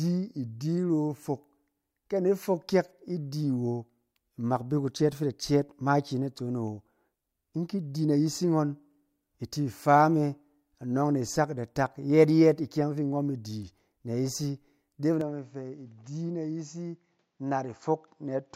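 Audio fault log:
15.21–18.55 s, input switched to a poorer device: capture likely moved to a narrower-band microphone or headset profile, with no gap at the switch. From there the speech loses everything above 7.6 kHz, sounds duller, drops about 5 dB, and carries new background noise roughly 45 dB down.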